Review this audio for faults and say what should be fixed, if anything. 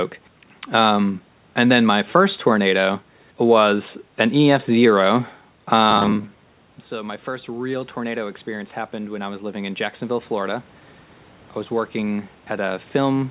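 From 5.91 to 6.71 s the speech turns into a rigid metallic buzz at 100 Hz. That is robotic sound from repeated short buffers: audio arrives late, so the last 10 ms gets looped while roughly half the real audio is skipped. A likely cause is network jitter starving the playout buffer. Giving the jitter buffer more headroom should keep it fed.

From 6.89 to 10.59 s there's automatic gain rising. The input drops by about 14 dB, around when the talker moves at 6.0 s, and the gain control gradually adds about 7 dB back, so the voice and room noise swell together. A faster attack, or keeping the mic distance steady, would prevent it.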